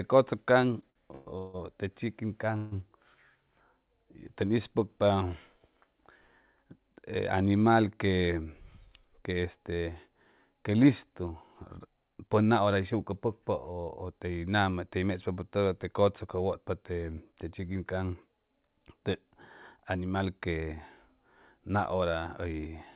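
From 0.62 to 1.56 s there are repeated stalls (stutter): packets kept reaching the receiver late, so its jitter buffer drained five times in under a second. Each gap, the longest 160 ms, was bridged by extending the last sound, about a third of that span, so the speech drags and stutters without losing anything.

At 2.57 to 2.74 s comes what is likely a call audio freeze, a 150 ms hold-up in packet delivery. The sound stretches into a brief buzzing continuation rather than silence, then resumes exactly where it stopped, leaving a short inserted pause and a delay 150 ms longer.

Just after "que listu", from 11.86 to 13.70 s, there is a jitter buffer speed-up. A backlog of buffered audio was shed by cutting many pitch-period-sized slivers, around 150 ms in all. The speech runs about 8% fast at unchanged pitch and sounds hurried.

A second speed-up, from 21.94 to 22.69 s, trims roughly 100 ms, pushing the pace about 12% faster. 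Throughout, nothing is heard above 4 kHz, which fits the narrowband G.711 A-law codec of the call path.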